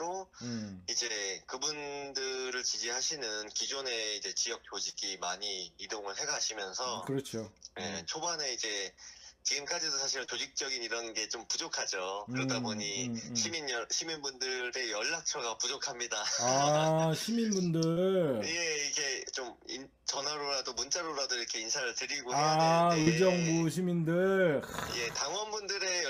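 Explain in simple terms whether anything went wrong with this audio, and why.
Something did go wrong, five times: short concealed packet loss at about 1.07, 4.89, 10.25, 17.92 and 23.02 seconds. Each time, a chunk of sound between 20 and 40 milliseconds long failed to arrive in time. The receiver covered each gap by stretching out the sound just before it, then eased back into the real signal. The result is a quick smear or wobble, over almost before you notice it.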